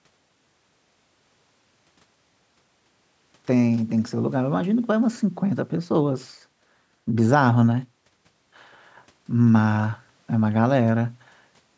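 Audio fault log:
Nothing stood out on listening to this speech, which carries the usual character of a call microphone path with its content ending around 8 kHz.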